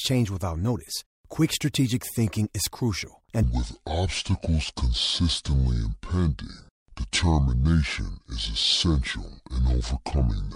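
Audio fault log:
3.43–10.56 s, section at the wrong speed: after "strategic thinking is crucial", the rest of the audio is likely being played against the wrong clock, running at 0.624 times its recorded rate. Because speed and pitch are tied together when samples are simply read out more slowly, the speech abruptly drops by roughly seven semitones and stretches out, turning deep, sluggish and drawn, and it stays that way to the end of the clip.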